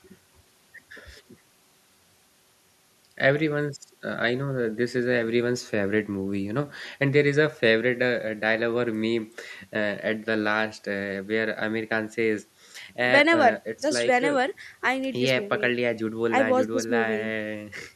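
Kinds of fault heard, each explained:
Nothing stood out on listening to this speech recording.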